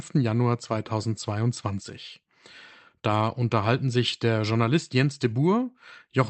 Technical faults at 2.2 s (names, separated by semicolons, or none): none